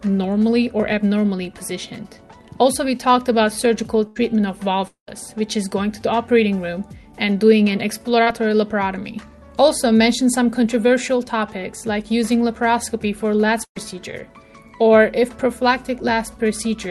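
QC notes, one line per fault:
4.07–4.18 s and 13.64–13.77 s, burst of packet loss: each time a run of packets goes missing and the receiver keeps extending the last sound, fading it, so you get a short held buzz or hiss. The first fill is about 82 ms, covering roughly 80 ms of lost audio. The second stretches about 109 ms over 120 ms lost, with the final 70 ms gone quiet before the audio resumes further on.
4.88–5.09 s, long network dropout: nothing usable arrives for about 200 ms, likely a network stall. The last sound gets carried on and faded, and the final 120 ms or so sits near silence. Then the audio picks up again with that stretch missing.
8.23–8.28 s, short concealed packet loss: about 40 ms never made it to the decoder in time. Roughly 31 ms of invented continuation from the preceding sound plugs the hole and then blends back into the real audio, so it comes across as a quick smear or wobble.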